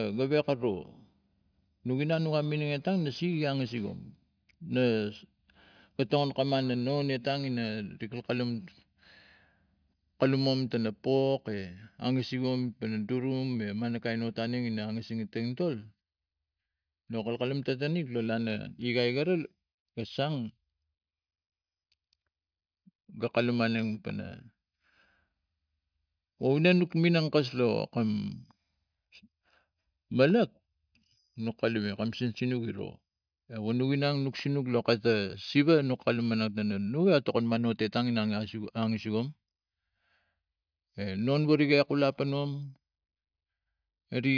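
Nothing technically wrong turns up in this speech recording, so there's no fault to place in time and no cause to pin down.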